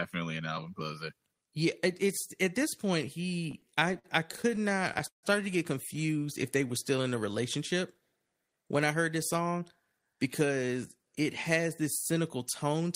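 From 3.51 to 5.26 s the speech drags and catches in a run of repeated stalls (stutter), some twenty brief hitches with the longest near 150 ms, where the sound stretches on and the longer holds fade. Packets kept arriving late, draining the jitter buffer over and over. The receiver padded about 393 ms, roughly a quarter of that stretch, with continued sound, so nothing is lost but the flow stumbles.

Between 5.96 and 7.03 s the speech slows to about 93% of normal pace at unchanged pitch, with sounds drawn out. This is a jitter buffer slow-down: running short of reserve, the receiver repeated single pitch periods and bits of pause, adding about 79 ms to rebuild its cushion.

From 8.93 to 10.00 s the speech turns hurried, running at about 109% speed with the pitch held steady. This is a jitter buffer speed-up: with more audio queued than its target, the receiver trimmed short pitch-period pieces again and again, removing roughly a tenth of a second to cut the delay.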